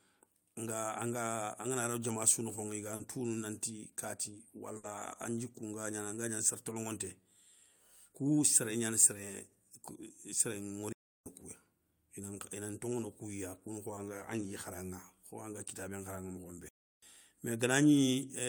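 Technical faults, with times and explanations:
2.95 s and 13.95 s, short concealed packet loss: About 40 ms of the call after "diama sou nokhoŋa i", and then 20 ms, arrived too late to decode. The receiver extended the preceding sound to bridge each gap, leaving a brief smear before "tounou nanti" and another later.
4.77 to 4.85 s, burst of packet loss: Packets, 60 ms in total, never arrived in time. The decoder stretched the last sound and faded it across the gap, giving a short held buzz or hiss before the speech resumes with that stretch missing.
10.92 to 11.26 s and 16.69 to 17.03 s, playback stall: Output drops to silence mid-flow for about 0.33 s each time, most likely because the player's buffer ran dry or its thread was blocked. The speech then picks up again after each pause.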